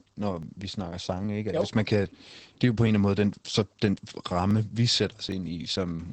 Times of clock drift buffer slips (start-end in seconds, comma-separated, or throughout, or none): 0.43-5.32